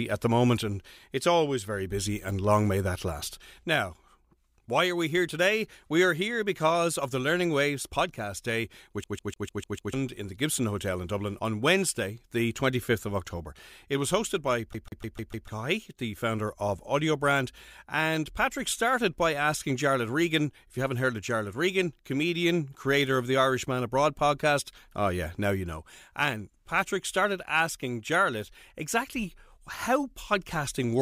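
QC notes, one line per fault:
9.04–9.94 s and 14.73–15.48 s, CD stuck on one turn: a damaged spot throws the pickup back each rotation, so the same 0.15 s slice of speech repeats six, then five times, each jump briefly muted. The waveform and spectrogram show identical blocks with thin silent gaps.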